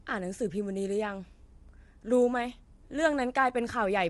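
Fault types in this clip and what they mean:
Low-delay AAC compression: the speech was likely squeezed through a low-delay AAC codec of the AAC-ELD kind, at a rate that fits roughly 32 kbps. At this low bitrate the coding roughens the pitch harmonics, so voicing turns rough and grainy with noise between them, and nothing remains above 11.6 kHz.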